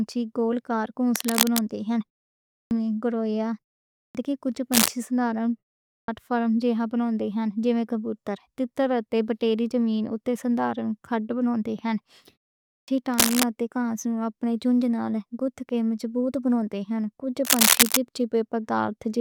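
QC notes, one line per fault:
1.15–1.59 s, 4.72–4.90 s, 13.13–13.43 s, 17.45–17.97 s: cable scratch noise. Dense, uneven crackling and rustling lies over the speech, about level with it or up to about 5 dB above it. This is likely a worn lead or connector being disturbed, its contact resistance jumping rapidly. The burst at 4.72 s comes right after "دے کچھ".
2.50, 3.95, 5.87 and 12.66 s: clipped start after a pause. After gaps of 0.3 to 0.5 s, each return loses roughly 200 to 220 ms of its opening, as at "میں گوریا" and "دے کچھ". The output device sleeps in silence and wakes too late, so speech begins abruptly, missing its first sounds.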